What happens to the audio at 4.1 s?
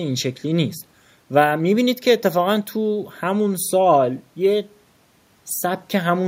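Nothing goes wrong at 4.1 s; the speech carries on intact through that moment.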